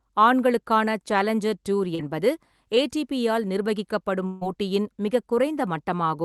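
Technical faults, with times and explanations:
1.95 to 2.01 s, short concealed packet loss: about 40 ms of the speech never arrived in time, and the receiver covered the hole with roughly 32 ms of synthesised continuation built from the preceding sound before crossfading back into real audio. The result is a brief smear at that point rather than a clean cut, since the decoder extrapolated pitch or noise shape from what came just before and then blended the genuine signal back in.
4.27 to 4.43 s, burst of packet loss: a run of about 140 ms went missing, too long for seamless concealment. The receiver extended the last sound for around 144 ms, attenuating it progressively, so the gap is heard as a held, fading continuation of the preceding sound with no drop to silence, followed by a resumption further on. Whatever was spoken in that span is absent, replaced by extrapolated filler from the call's Opus decoder.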